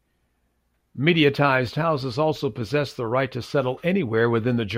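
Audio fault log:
No faults heard in this recording.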